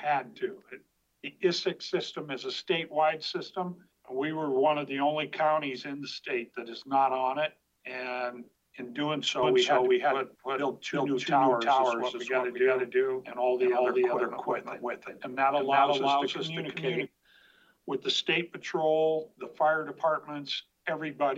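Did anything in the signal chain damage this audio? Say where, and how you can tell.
Yes. From 9.43 to 17.07 s a doubled audio track, likely a second slower capture path, repeats everything about 0.4 s late, equally loud, without the decay or room colour of echo, starting and stopping abruptly.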